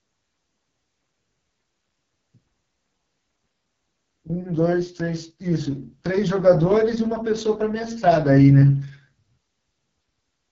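The speech has passed through the AMR wideband (HD Voice) codec at one of its lowest rates, and the heavy damage fits the 6.6 kbit/s mode. At that rate the pulse-driven vocal tract model has too few bits to track the voice, so the speech sounds rough and raspy from start to finish. Above 6.4 kHz there is only synthetic noise in place of real detail, and nothing at all above 7.4 kHz.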